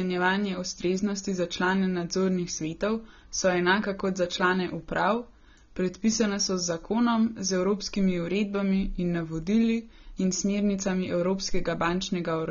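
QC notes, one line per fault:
throughout: AAC compression. Nothing sounds above 6.9 kHz, so speech is dull and smeared. Likely AAC-LC coarsely quantising at a low bitrate, fitting about 24 kbps.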